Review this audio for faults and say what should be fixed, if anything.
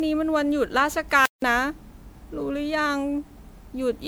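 Generation loss runs through the whole clip. The speech sounds swirly, hollow and smeared, and consonant onsets are blurred. That is more damage than a single MP3 pass would leave, and the sound points to a 128 kbit/s chain. The likely cause is around five successive MP3 decode and re-encode cycles, each requantising on a shifted frame grid so the noise and spectral holes accumulate. To prevent it, keep a lossless master and encode to MP3 only once, from that source.

Playback stall at 1.26 s: the speech drops to silence for about 167 ms, until 1.42 s. The player's buffer likely ran dry or its audio thread was blocked, so no samples reached the output until it recovered. To prevent it, give the playback path a larger buffer and keep the audio thread free of blocking work.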